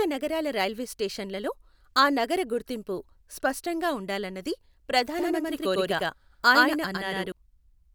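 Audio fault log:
5.18–7.32 s doubled audio track: a dry, equally loud echo abruptly appears about a tenth of a second behind, likely a second copy mixed in out of step.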